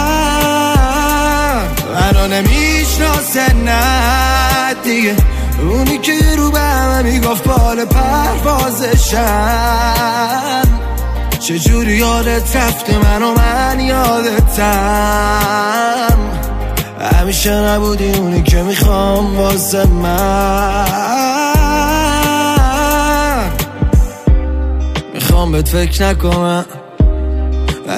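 No faults can be heard anywhere in this recording.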